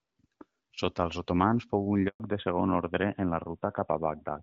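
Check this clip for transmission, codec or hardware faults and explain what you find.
Two transmission faults occur together at about 2.1 s: a handover gap followed by a fallback to narrowband.

Handover gap, 2.08 to 2.20 s: the call was passed from one network to another, and during the switch no speech frames reached the receiver. The speech fades out within a few tens of milliseconds and stays silent for about 120 ms until the new link delivers audio again. Whatever was said in that window is gone for good rather than delayed.

Fallback to narrowband, 2.20 s to the end: the new link carries the call on an older narrowband codec instead of HD Voice. Before the switch, the light wideband coding suggests AMR-WB at around 12.65 kbit/s. Afterwards, the character fits AMR-NB at about 12.2 kbit/s. That codec cannot carry anything above 4 kHz, so the upper band disappears abruptly, and the voice becomes duller, boxier and rougher for the rest of the clip.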